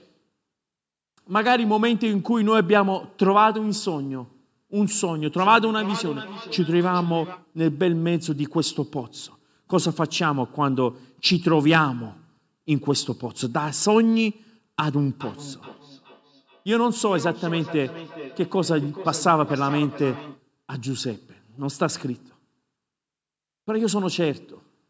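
Speech with feedback echo between two devices from 5.37 to 7.48 s and 14.92 to 20.43 s: a second device replays the audio into a microphone, so distinct repeats return roughly every 0.4 s at up to about 13 and 15 dB below the speech. Unlike room reverberation, the repeats are separate and evenly spaced rather than a smooth decay.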